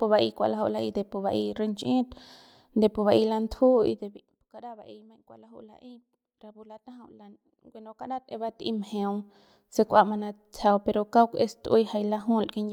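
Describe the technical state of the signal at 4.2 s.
At 4.2 s the speech is in the middle of a zipper noise fault running from 3.86 to 4.44 s, ending just before "kara ba'ey maiñ kua". The level falls by roughly 25 dB in unsmoothed 1 dB steps, about 50 per second, and each jump leaves a tiny click, so a fast ticking rides on the fade. On a waveform the envelope descends as a staircase; a spectrogram shows thin broadband vertical lines spaced about 20 ms apart.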